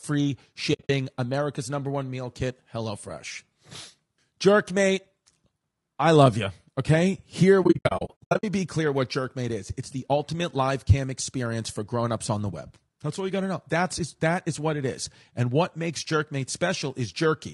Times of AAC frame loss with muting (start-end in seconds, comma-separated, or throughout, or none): 0.73-0.90, 7.63-8.44